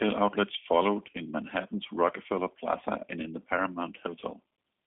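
Throughout, G.729 coding, which fits an 8 kbit/s VoIP link, leaves the speech rough and synthetic, with nothing above 3.8 kHz; a plain telephone filter wouldn't add this buzzy texture.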